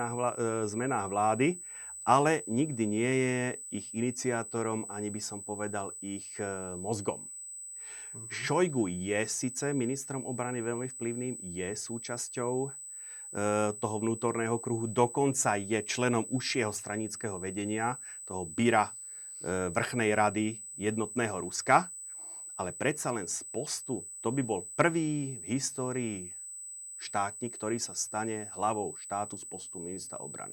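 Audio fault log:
throughout, USB whine: a steady, fixed-pitch whine sits under the speech at 8 kHz, about 15 dB below it. That pitch matches the 125 microsecond microframe rate of a high-speed USB bus. Each microframe pulls a burst of current, and that ripple leaks into the audio through the shared power or ground, so it comes through as one high tone that doesn't follow the speech.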